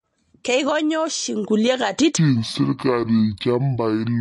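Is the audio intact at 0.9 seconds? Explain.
No. MP3 compression likely runs throughout. Nothing sounds above 11.2 kHz, and weak components flicker between frames, giving watery speech that fits a 48 kbps bitrate.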